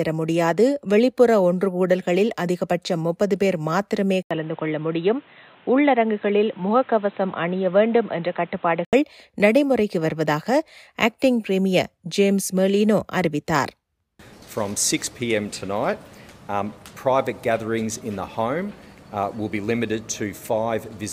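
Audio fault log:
4.23–8.93 s, input switched to a poorer device: After an 80 ms gap, the sound turns dull and boxy, with nothing above 4 kHz. Faint new background noise appears. Level barely changes. The likely cause is input moving to a narrower-band microphone, then back.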